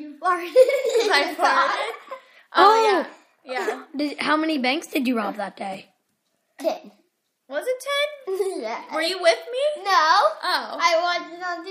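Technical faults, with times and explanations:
No technical faults can be heard anywhere here.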